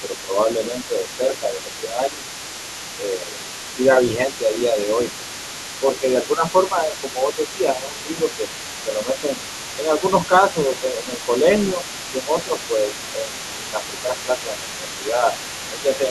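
The other side's voice leaking through runs from 0.0 to 16.1 s: a second voice sits about 15 dB under the speech throughout. It is likely loudspeaker echo that the echo canceller left in the microphone signal.

Speech suppressed in double talk follows in three stretches, from 0.01 to 2.28 s, from 2.94 to 5.24 s and from 5.8 s to the end. The talker dips by around 5 dB for roughly a second and a half, a second, then five seconds in all, likely because the canceller turned down both voices while overlapping.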